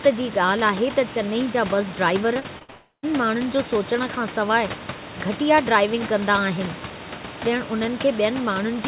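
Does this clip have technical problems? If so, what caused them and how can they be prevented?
Yes. From 2.34 to 2.70 s the call suffered repeated packet loss (robotic sound): five separate gaps, the longest 59 ms, were each patched by stretching the preceding sound, so about a third of that span is synthetic and comes out choppy with pieces missing. A more stable connection and forward error correction or redundant packets would prevent it.

Right after, from 2.70 to 3.05 s, the audio turns into a fading continuation of the last sound, then about 70 ms of near-silence before it resumes with a piece missing. This is likely a long network dropout. A wired or less congested link would prevent it.

Throughout, the G.711 A-law path at 64 kbps carries nothing above 4 kHz, and room noise sits about 15 dB below the speech.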